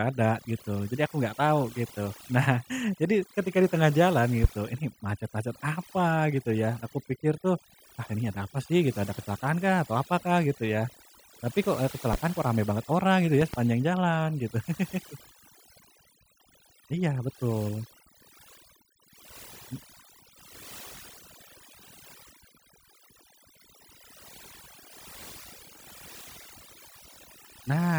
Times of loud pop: 4.44-4.48, 12.13-12.17, 13.41-13.57

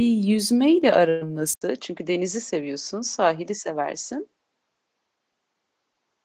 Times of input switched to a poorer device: 1.54-6.25

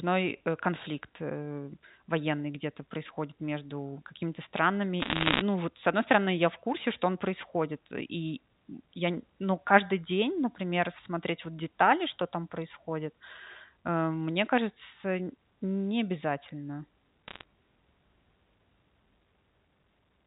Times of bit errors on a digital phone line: 5.00-5.42, 17.28-17.44

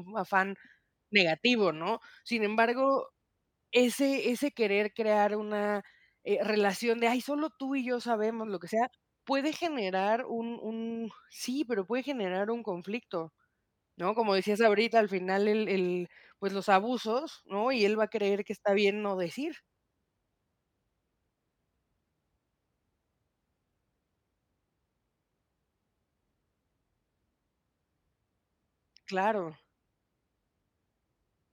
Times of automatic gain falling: none

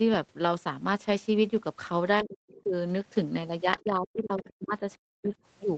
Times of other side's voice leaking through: 2.49-2.57, 4.43-4.73, 5.23-5.30

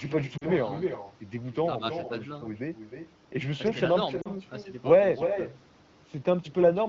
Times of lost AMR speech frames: 0.37-0.46, 4.21-4.28

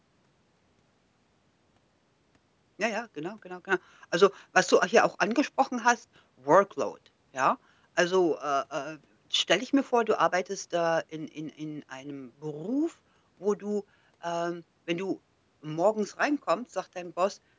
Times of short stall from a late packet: none

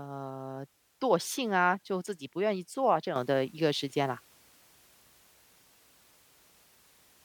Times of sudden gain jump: 3.16-7.24

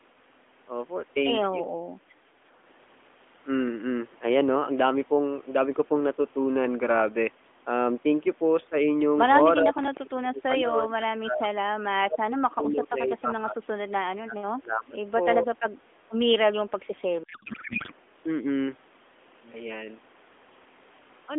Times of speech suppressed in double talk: 9.61-11.56, 12.04-13.88, 14.15-14.99

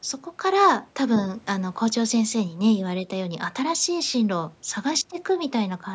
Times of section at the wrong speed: none

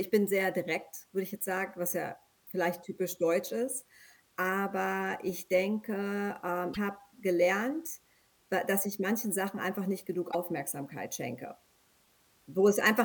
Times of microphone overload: none

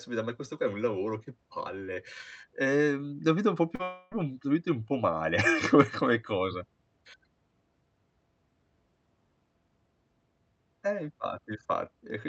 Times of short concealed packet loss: 3.75-3.82

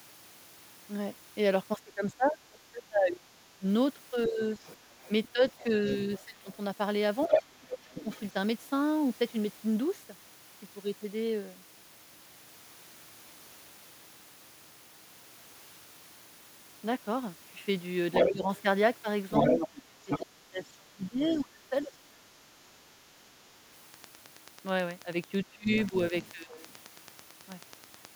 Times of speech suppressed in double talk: 1.77-4.41, 5.32-8.10, 18.31-18.50, 19.47-21.93, 25.44-26.61

